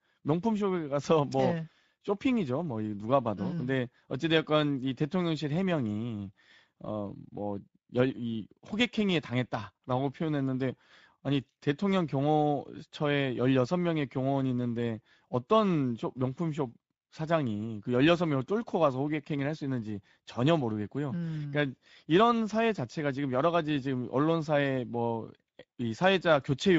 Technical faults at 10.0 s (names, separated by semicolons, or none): Speex codec